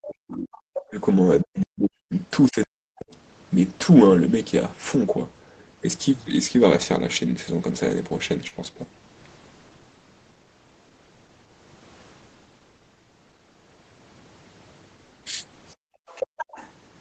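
Speech suppressed in double talk runs from 0.00 to 3.11 s. The talker's level repeatedly sinks, at its deepest by something like 40 dB, for roughly two seconds in total within that span. The words thin out and break into fragments while a second voice is present. The likely cause is an echo canceller that could not tell the near talker from the loudspeaker echo during simultaneous talk, so it attenuated everything it heard.

The other side's voice leaks through at 0.04 to 0.85 s and again at 1.58 to 2.65 s. That second voice is fairly prominent in the first stretch, roughly 10 dB under the talker. In the second it is much fainter, down around 30 dB, a ghostly trace in the background. It is probably loudspeaker playback that the echo canceller failed to fully remove from the microphone pickup.

A short concealed packet loss falls at 8.47 to 8.54 s. About 40 ms of audio never arrived in time, and the decoder filled 39 ms of the gap by extending the preceding sound before blending back into the real signal. 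The result is a brief smeared, wobbly blip, heard against a band that stops at 8 kHz.

The other side's voice leaks through again at 15.68 to 16.71 s, sitting roughly 15 dB below the talker.

Background gated by the echo canceller overlaps this last leak, from 15.75 to 16.37 s. The room tone drops away by about 38 dB for around 0.4 s in total and then returns. The canceller clamped the microphone down hard while the loudspeaker was active, and released it once the playback eased.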